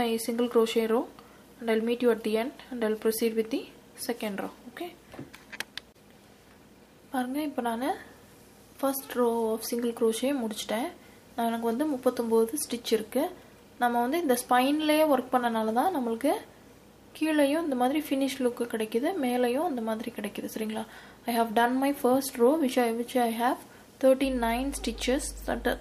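Mains hum enters at 24.22 s and runs to the end of the audio at 25.80 s: a steady low tone at 50 Hz, sitting roughly 15 dB below the programme. The tone comes from the power line leaking into the signal path, through a ground loop between connected equipment or magnetic coupling from a nearby transformer, which fits a 50 Hz mains supply.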